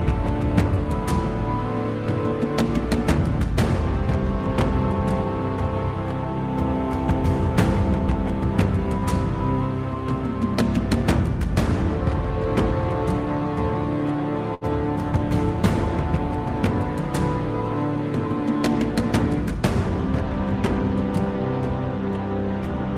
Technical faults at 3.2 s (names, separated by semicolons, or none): none